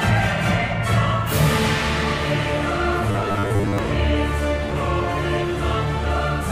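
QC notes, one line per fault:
3.11–3.78 s, robotic sound from repeated short buffers: the sound turns into a rigid metallic 100 Hz buzz, likely from a 10 ms slice being replayed while about half the real audio is skipped. Spectrogram shows evenly spaced 100 Hz harmonic stripes; waveform shows identical repeating cycles.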